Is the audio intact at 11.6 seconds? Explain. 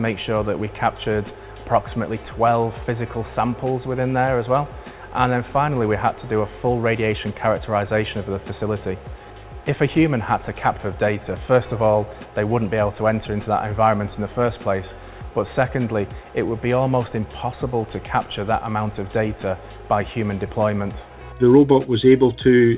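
No. From 11.46 to 12.21 s a jitter buffer speed-up is running: the receiver repeatedly cut short pitch-period-length pieces, about 50 ms in total, to drain excess buffered audio. Playback runs at 107% with unchanged pitch, so it sounds briefly hurried.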